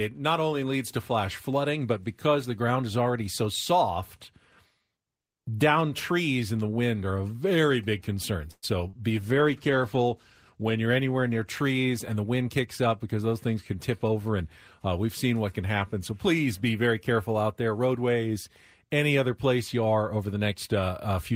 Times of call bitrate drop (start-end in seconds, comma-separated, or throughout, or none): 9.10-12.52